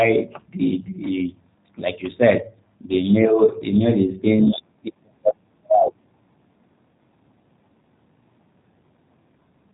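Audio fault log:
throughout G.729 codec: speech rebuilt from a vocal tract filter and sparse pulses, consistent with 8 kbit/s, loses everything above 3.8 kHz and sounds plainly rough and synthetic.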